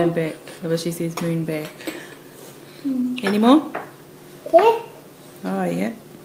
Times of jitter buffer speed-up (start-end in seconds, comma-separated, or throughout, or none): 2.95-3.39